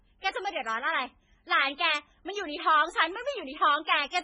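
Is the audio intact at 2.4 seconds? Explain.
No. At 2.38 s a single sharp, broadband tick cuts through, unrelated to the speech: a bit error spike, where one flipped bit throws the value by a power of two and it snaps straight back, which points to one corrupted sample. Underneath, the speech sounds heavily watery and swirly, with nothing above 10.5 kHz, likely from MP3 compression at a very low bitrate, around 16 kbps, dropping weak frequency lines.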